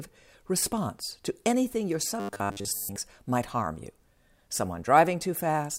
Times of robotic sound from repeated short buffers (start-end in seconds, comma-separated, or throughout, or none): 2.20-2.96